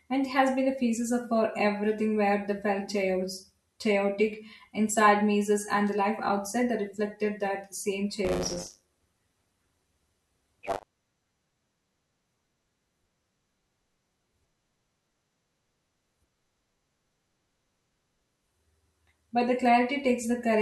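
Just after "that reflected that same", from 8.24 to 10.84 s, the speech takes on a steady robotic buzz at 100 Hz: buffer tearing. The writer and the hardware reader of the ring buffer have drifted into each other, so every period, pointing to roughly 10 ms, carries about a fifth of stale audio from one lap earlier, some tens of milliseconds old, bounded by hard joins. The rattle follows the speech.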